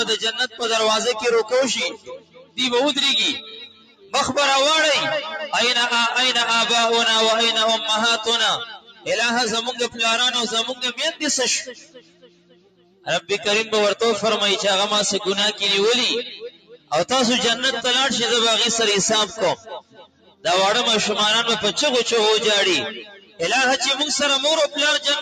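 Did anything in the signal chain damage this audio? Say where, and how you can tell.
Yes, at the call-processing stage: a noise suppressor applied to music or sounds stays active throughout, pumping the level by around 15 dB as sustained material is treated as noise.

Sound is cut by the noise suppressor at 0.32–2.59, 3.38–4.14, 8.62–9.11, 9.66–13.31, 16.28–16.92, 19.27–20.46 and 22.9–23.43 s. Sustained passages sink by up to about 20 dB.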